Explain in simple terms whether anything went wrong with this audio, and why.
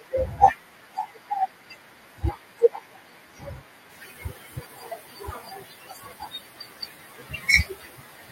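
Noise suppressor artifacts run through the whole recording. The cleanup processing keeps pushing the background down between words, so the background noise sinks between the words and rises again under them.

Speech cut by the noise suppressor also lasts from 0.0 to 8.32 s. The processing mistakes quiet parts of the speech for noise, so soft consonants and word endings come out swallowed and faint.

The room noise that grows louder at about 4 s is simply part of the recording, not a fault.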